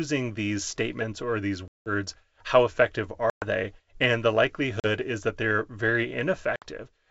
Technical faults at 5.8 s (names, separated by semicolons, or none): none